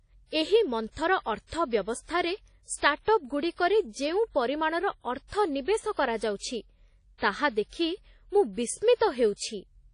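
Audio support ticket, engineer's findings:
Ringing, washy speech throughout, with hiss that breathes with level and nothing above 10.1 kHz. Likely WMA compression at a low bitrate, around 32 kbps by ear. Long transform blocks smear quantisation noise and zero the weak lines.

Pre-echo at 7.18 to 7.22 s, right before "ତାହା ଦେଖି ମୁଁ". There's a short hiss ahead of the attack, and the onset sounds soft. It's the same transform codec. Noise sized for the loud onset spreads back across the quiet 42 ms before it.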